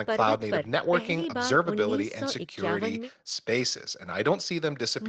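Nothing's actually wrong with this bit of speech; it sounds like a normal call, with the top end stopping around 8 kHz as you'd expect from a wideband Opus-style call codec.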